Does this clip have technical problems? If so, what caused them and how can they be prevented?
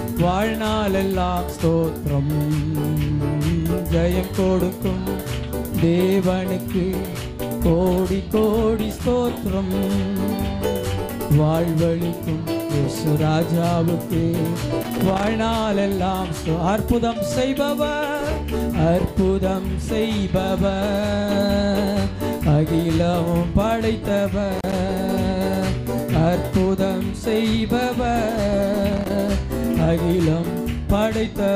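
Yes, there's loose connector crackle in bursts at 14.83–15.28 s, 24.56–24.73 s and 28.92–29.10 s, where a worn contact keeps breaking the signal. Cleaning or replacing that plug and securing the cable should stop it.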